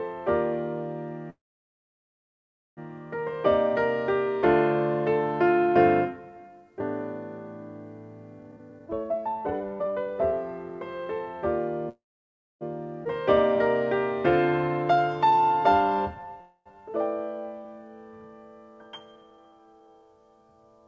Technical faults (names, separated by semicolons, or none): call audio freeze; jitter buffer speed-up; skip ahead; jitter buffer slow-down